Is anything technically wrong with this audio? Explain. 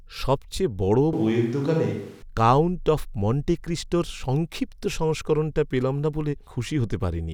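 Yes. From 1.13 s to 2.22 s the speech abruptly turns roomy and hollow, losing low-end body, with more background noise, sitting roughly 30 dB below the speech. The overall level stays about the same. Both the change in and the return are sudden. This is likely a switch to a distant microphone: the close mic's feed dropped out or went unused, so this stretch comes from a mic further away that captures more room reflection and ambience.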